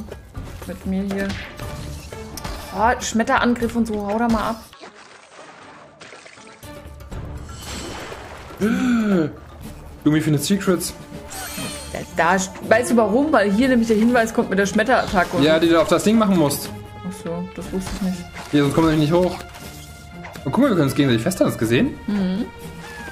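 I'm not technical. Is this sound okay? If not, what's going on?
No. From 4.73 to 6.63 s the sound turns duller and quieter, with a faint new background hiss and no gap at the change. The likely cause is an input switched to a poorer device.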